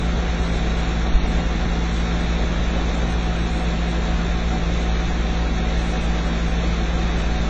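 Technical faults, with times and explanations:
Throughout, AAC compression: the audio is dull and smeared, with nothing above 9 kHz and a plainly audible warbling, fizzy texture on sustained and noisy parts. This likely comes from AAC-LC coding at a low bitrate, which fits roughly 24 kbps. With so few bits, the encoder drops the top of the spectrum and quantises the remaining frequency lines coarsely against its hearing model. That leaves gaps and shifting textures from frame to frame.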